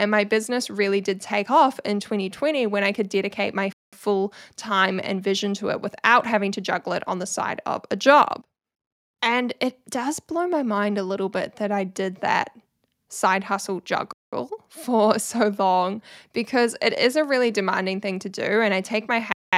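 At 3.73, 8.93, 14.13 and 19.33 s the speech halts for 200 ms, a gap between chunks: silence is inserted between successive 5-second pieces. Unlike a dropout, nothing is lost. Each hard-edged hole pauses the speech, which resumes exactly where it stopped.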